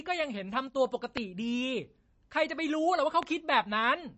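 Throughout the speech there is plainly audible MP3 compression, likely from a low bitrate. Nothing is heard above 7.9 kHz, which fits an encoder running at about 32 kbps. Weak detail flickers between frames, giving a watery swirl rather than the steady dullness of a simple low-pass filter.

From 0.67 to 0.76 s one channel drops out, likely from a brief loss of one stereo side. The shared sound falls abruptly by about 6 dB and then recovers. A fade would slope gradually, and a full mute would leave silence.

A loud pop sits from 1.17 to 1.19 s, about 20 dB above the speech, and a second, weaker one from 3.23 to 3.25 s, about 10 dB above. Each is a single sharp pulse, likely a voltage spike from a switch or static discharge. The speech carries on underneath, unlike a dropout.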